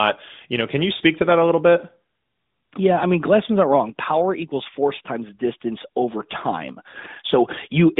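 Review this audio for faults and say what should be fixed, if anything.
Lost AMR speech frames at 0.98–1.02 s and 6.92–6.96 s: each time a single 20 ms frame fails, and the decoder conceals it by reusing the previous pitch and vocal-tract settings at lower gain, giving a brief dip or warble. On a spectrogram this looks like a short energy dip with smeared, flattened harmonics inside the narrowband speech band; the waveform shows a momentary drop in amplitude. Stronger channel coding or a cleaner radio link would keep frames from failing their checksum.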